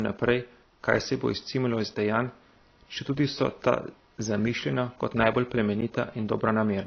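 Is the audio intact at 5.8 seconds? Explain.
No. At 5.81 s the speech cuts abruptly for about 10 ms, heard as a tick. This is a block of digital silence: samples replaced by zeros, with no fade in or out.

Underneath, a faint buzz pulses roughly two hundred times a second, far below the speech. This is computer activity noise, where processor or peripheral load disturbs the audio circuit's shared ground.

The sound is also dull, with nothing above 6.6 kHz, and carries mixed codec smearing. This likely comes from transcoding between lossy codecs, which would fit a low-bitrate AAC stage followed by WMA.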